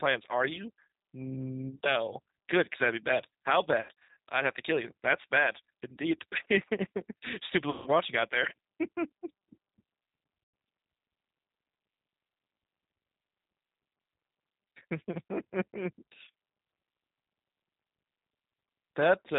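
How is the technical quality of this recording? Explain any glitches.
The speech is plainly coded at low bitrate, with three dropouts patched over by the decoder. Throughout, G.729 codec damage leaves it rough, synthetic and capped at 4 kHz, which fits an 8 kbit/s model that rebuilds speech from filter and pitch. VoIP packet loss concealed by the speech codec occurs at 3.81–4.17 s (220 ms lost, scattered, longest gap 80 ms), 7.70–7.90 s and 10.44–10.54 s. The decoder extends its last pitch into a fading buzzy tone or coloured noise rather than leaving silent gaps, and the sound stays weak briefly afterwards.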